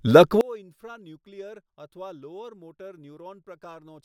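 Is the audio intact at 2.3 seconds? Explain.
No, at 2.3 s you're inside a stretch from 0.41 s to the end where the speech drops by about 28 dB and turns faint. That's the signature of one channel inverted, most likely a stereo channel with flipped polarity. When the two sides get summed to mono, everything they share cancels, so the centred voice largely disappears and only the faint difference between the channels is left.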